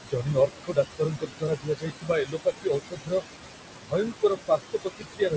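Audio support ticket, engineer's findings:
Noise suppressor artifacts, whole clip. Suppressor attenuating bands it classifies as steady noise, about 20 dB of reduction, frame by frame. Room noise only about 7 dB under the speech; background drops out in gaps and returns beneath speech. Band ends at 8 kHz, consistent with a G.722 call path.

Speech cut by the noise suppressor, 0.01–3.24 s and 3.76–5.36 s. Suppressor misreading low-level speech as noise and pulling it down with the background, dips as deep as about 22 dB. First span loses about two seconds in total. Soft consonants, word endings and quieter stretches come out swallowed or faint.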